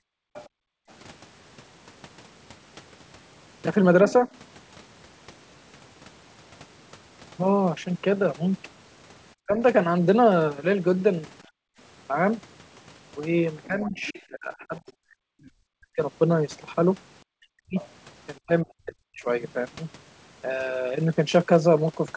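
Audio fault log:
0.00–0.88 s and 11.48–11.78 s, background gated by the echo canceller: While the far end played through the loudspeaker, the canceller clamped the microphone hard, so the room sound falls away by about 40 dB. It vanishes for most of the first stretch and for the whole second one, then returns when the canceller releases.
0.34–0.47 s, 13.63–15.46 s and 17.76–17.88 s, other side's voice leaking through: The echo canceller likely failed to strip the loudspeaker signal from the microphone, so a second voice sits roughly 20 dB under the main speech. The first and last appear as brief scraps, and the middle one as a sustained stretch of nearly two seconds.
9.43–9.59 s, 13.67–16.02 s and 17.23–19.27 s, speech suppressed in double talk: With both sides talking at once, the canceller likely could not separate the near voice from the echo and turned everything down by around 40 dB. 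The first is a short dip, and the longer two lose the speech in chunks totalling about a second or more each.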